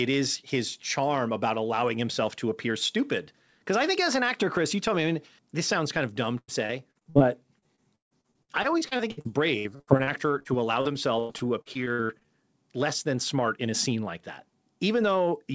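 From 6.38 to 7.23 s, after "sounds kind of dumb", and again from 7.59 to 12.28 s, before "less than smart in", repeated packet loss (robotic sound) chops the audio. Lost packets are patched by stretching the previous sound, giving choppy sound with pieces missing. Gaps reach 99 ms in the first stretch and 154 ms in the second, covering about a third and about a quarter of each span. On a spectrogram, which is empty above 8 kHz because of the call codec, these show as smeared, repeated harmonic bands. The waveform shows flattened, looping segments.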